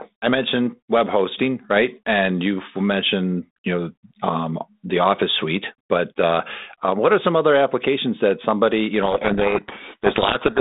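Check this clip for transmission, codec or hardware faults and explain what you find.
One fault is present: a codec payload misread running from 9.02 s to the end at 10.60 s. The clip travels over a 32 kbit/s G.726 link, band-limited to roughly 200 Hz to 3.7 kHz with light coding grain. At 9.02 s, sender and receiver stop agreeing on the bit order of the G.726 code words. The decoder therefore applies each adaptive-difference value wrongly, and the speech disappears under harsh, grinding distortion until the clip ends.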